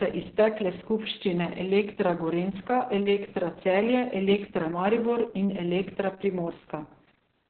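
From start to finish the speech carries heavy Opus voice compression. Nothing survives above 4.5 kHz, so it's muffled and phone-like, and the coarsely coded excitation makes it hoarse and a bit robotic, which fits a very low bitrate, around 6 kbps.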